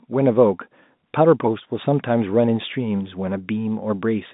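No technical faults are audible.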